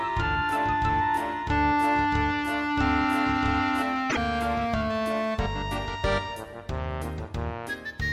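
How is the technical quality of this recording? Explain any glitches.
Two technical faults stand out in the first half of the clip.

From the very start until 3.82 s there is a doubled audio track. A second copy of the sound was likely captured again through a slower path, or an edit left two copies out of step. The duplicate runs roughly a second and a half behind the original and is about 5 dB quieter. It is full-band with no decay or room colour, so it reads as a flat echo rather than reverberation. It is already running when the clip opens and cuts off abruptly at 3.82 s.

Shortly after, from 4.06 to 4.17 s, there is damaged data in a compressed stream. Some of the encoded frames there were corrupted, so the decoder misread or rejected them, lost its place, and hunted for the next valid frame header before resuming. The result is a brief chirp, squawk, click or short hole, about a tenth of a second long.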